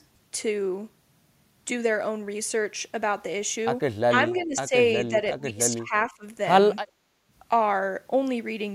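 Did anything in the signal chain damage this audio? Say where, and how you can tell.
Yes, in the call-processing stage, where the echo canceller acted on this speech. Speech is suppressed in double talk at 4.08–4.12 s (about 25 dB down), 4.39–4.74 s and across 4.98–6.24 s (about 20 dB down, roughly 0.7 s in total). On a waveform the envelope sags in those spans, likely because the canceller mistook overlapping talk for loudspeaker echo.

An echo leak appears at 4.36–4.43 s: a faint copy of earlier speech arriving 354 ms late, about 30 dB below the talker. A spectrogram shows a weak repeat of the earlier harmonic pattern, which is likely residual loudspeaker pickup the canceller failed to subtract.

The background is gated by the echo canceller from 6.86 to 7.27 s. The room noise drops by about 8 dB for roughly 0.4 s and then returns. On a spectrogram this shows as a short, uniform hole in the noise floor across all frequencies, the canceller clamping the microphone while the far end played.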